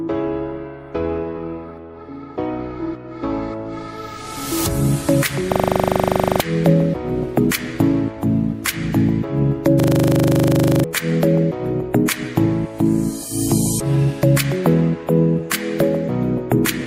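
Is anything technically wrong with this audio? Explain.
Yes. A system hang loop occurs twice, from 5.52 to 6.4 s and from 9.8 to 10.84 s. The system froze while the hardware replayed one 40 ms buffer, 22 and then 26 times. At 25 Hz this gives a harsh, rapid stutter. About a second of audio is lost each time.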